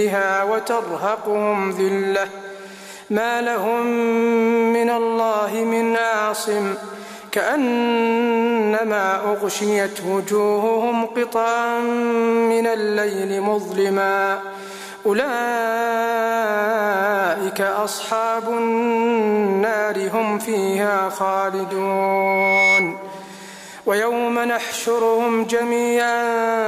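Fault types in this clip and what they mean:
Loudspeaker feedback squeal: from 21.80 to 23.06 s a single tone at 2.2 kHz rises out of the sound, swelling over roughly a second until it sits a few decibels above the rest of the audio. A microphone is picking up the loudspeaker it drives, and at 2.2 kHz the round-trip gain has passed unity, so that frequency feeds itself and keeps growing until it stops at 23.06 s.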